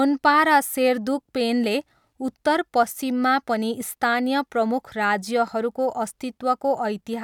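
No technical faults can be heard anywhere in the speech.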